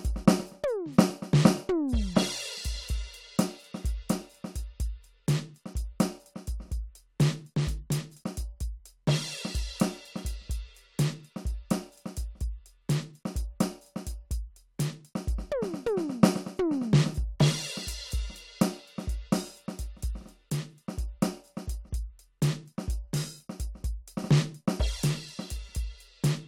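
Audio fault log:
4.22 s, overlap between stream segments: a tiny skip in the music as about 19 ms drops out and the waveform jumps. Two neighbouring 4-second segments carried overlapping time stamps, so the player trimmed audio that was never actually doubled.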